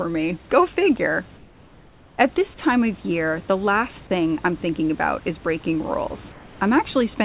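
During pauses the sender likely stopped transmitting under discontinuous transmission, and the receiver filled the gaps with synthetic noise. That comfort noise in place of the background runs from 1.37 to 2.18 s (810 ms) and again from 6.32 to 6.59 s, just after "thinking about is breaking". Each time the room's textured background turns into a flat, featureless hiss about 3 dB quieter, band-limited to nothing above 4 kHz like the rest of the call audio.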